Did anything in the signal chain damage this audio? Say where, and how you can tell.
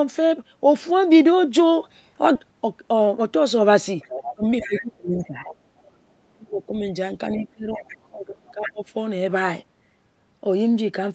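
Yes. At 2.35 to 2.37 s the speech jumps forward with no fill, a skip ahead. Roughly a second and a half of audio is missing and the two sides butt straight together. That points to the network or jitter buffer discarding a queued stretch to reduce delay.

From 2.93 to 3.39 s there is a jitter buffer speed-up. The speech runs at about 111% speed with unchanged pitch and sounds hurried. The buffer trimmed short pitch-period slices, around 50 ms in total, to drain excess stored delay.

The other side's voice leaks through at 4.00 to 4.21, 4.60 to 4.80, 5.44 to 5.91, 7.37 to 7.91 and 8.65 to 8.71 s. It sits about 15 to 25 dB below the main speech. The likely cause is residual loudspeaker echo left by the call's echo canceller.

The main speech is suppressed in double talk at 4.21 to 5.45, 6.34 to 6.73 and 7.36 to 8.85 s. It dips by up to about 25 to 30 dB. This is likely the echo canceller attenuating both talkers when it cannot separate them.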